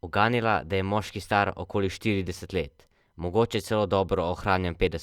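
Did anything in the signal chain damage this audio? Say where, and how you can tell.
No, nothing in the chain from capture to playback has left an audible mark on this speech.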